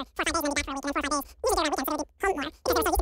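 From start to finish this speech has a wrong sample rate fault: it runs about 2.76 times too fast and 17.6 semitones high, which fits 16 kHz audio played at 44.1 kHz.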